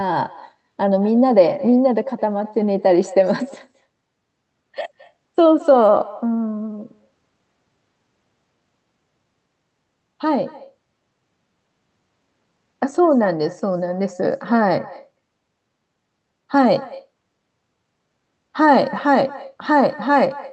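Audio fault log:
Throughout, echo with no canceller: a thinner copy of the speech trails about a fifth of a second behind, roughly 21 dB down, because far-end loudspeaker pickup returns unremoved.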